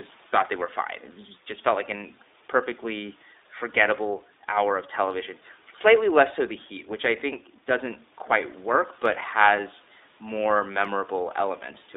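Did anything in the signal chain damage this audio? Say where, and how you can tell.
Yes, at the codec stage, all the way through the speech. It's iLBC: nothing gets past about 3.7 kHz or below about 250 Hz, and the voice has that slightly rough, synthetic edge that points to 20 ms frames, each with its excitation coded on its own, which fits the 15.2 kbps mode. The room noise, sitting about 31 dB under the speech, comes through thin and a bit mangled too.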